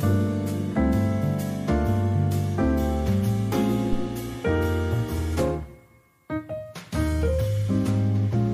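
A phantom power thump lands at 3.93 s and runs to 4.10 s. Switching the supply on a live input sends a voltage step through the coupling capacitors. The result is a deep low thump peaking at about -14 dBFS that dies away within roughly 38 ms.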